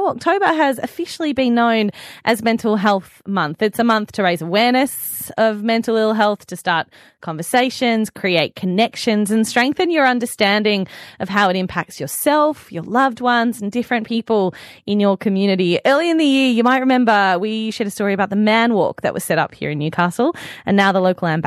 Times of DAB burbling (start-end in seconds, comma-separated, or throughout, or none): none